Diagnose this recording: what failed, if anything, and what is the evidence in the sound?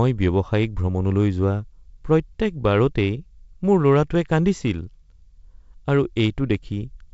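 Nothing failed in this recording.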